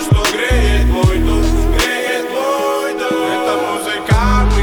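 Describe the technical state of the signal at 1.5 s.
At 1.5 s the signal shows low bit depth with dither, spanning 0.76 to 2.85 s. Samples are rounded to about 7 bits after dither is added, so the quantisation error becomes a steady, even hiss roughly 30 dB below the signal, without distortion.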